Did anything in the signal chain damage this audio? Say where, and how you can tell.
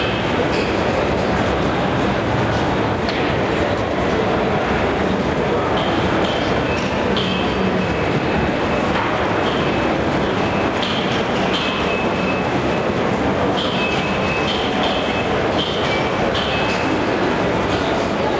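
No, nothing in the chain damaged this audio.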